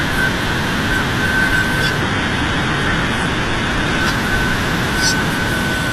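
From 2.0 to 4.0 s the speech suddenly turns dull and synthetic. Nothing is present above 11.7 kHz, the upper treble has a metallic, swirly quality, and codec artefacts grow. At 4.0 s full clarity snaps back, with no gap at either edge. This is an adaptive stream at a lower bitrate: the player briefly switched to a leaner version of the stream. The sound points to a drop from roughly 96 kbit/s AAC-LC to HE-AAC near 16 kbit/s, where the highs are rebuilt by band replication rather than coded directly.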